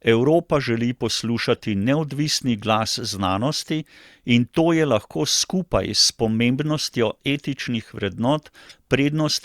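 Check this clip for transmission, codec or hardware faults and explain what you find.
Two bursts of corrupt frames decoded. At 1.55 to 1.60 s, just before "neodvisni glas znanosti in", and again at 8.65 to 8.73 s, bit errors damaged a few compressed frames in a row, and the decoder played them anyway. The misread gains and codes place energy at frequencies that don't belong to the speech, for roughly the span of the damaged frames. Each is heard as a brief chirp or blip: the first faint, the second somewhat louder.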